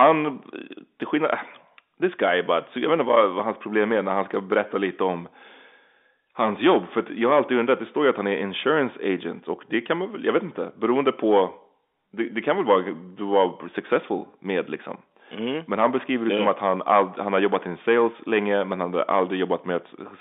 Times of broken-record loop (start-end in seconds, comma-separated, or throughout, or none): none